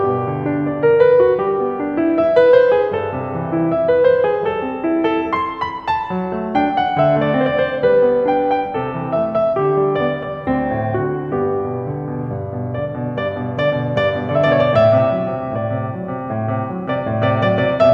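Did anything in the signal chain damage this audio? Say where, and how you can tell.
No, nothing in the signal chain has damaged this music recording. None of the stages it passed through has left a mark that can be heard.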